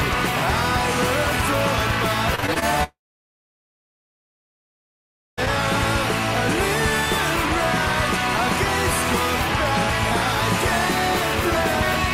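From 2.35 to 2.64 s, repeated packet loss gives the sound a robotic edge. Audio goes missing in several short holes here. The longest is about 25 ms. Each hole is filled by stretching the sound just before it. That patching covers about a third of this stretch. So the sound turns choppy, with small pieces gone.

At 2.84 s, a long network dropout begins and lasts until 5.39 s. About 2.5 s of audio is lost. The last sound is held briefly as a fading buzz. Then about 2.4 s of silence follows. The sound resumes at 5.39 s, with the lost part simply absent. The likely cause is a stall in the network stream, with nothing arriving for that whole span.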